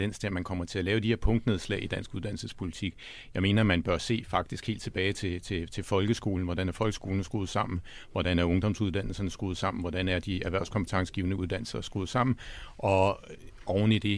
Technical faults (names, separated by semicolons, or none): none